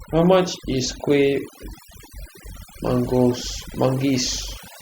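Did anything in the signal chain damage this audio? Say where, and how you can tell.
Yes. The damage sits at the call-processing stage, where overdone noise removal was run across the whole clip. Listen to the gaps between phrases: the background doesn't sit at a steady low hiss but drops to near silence with little twinkling specks popping in and out. The suppressor is switching individual frequency bands off whenever they look like noise to it, and the softer parts of the speech get caught too.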